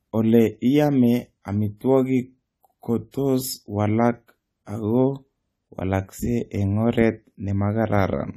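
A speech recording with clearly audible codec damage throughout. Nothing is present above 14 kHz, and the voice sounds dull and smeared, with a watery, warbling texture on sustained sounds and sibilants. This is likely AAC compression, and the amount of damage fits a low bitrate around 32 kbps. A simple low-pass filter would give the same dullness but leave the voice steady. Here the upper bands fizz and shift from moment to moment as the encoder starves or fills them. From 3.11 to 3.14 s there is pre-echo: a short hiss about 28 ms long rises just before a sharp onset, and the attack itself sounds softened. The encoder spread its quantisation noise across a whole transform block, so noise meant for the loud part leaked into the quiet gap before it. A click would be a single spike, and reverb would trail after the sound, but this smear comes before the attack.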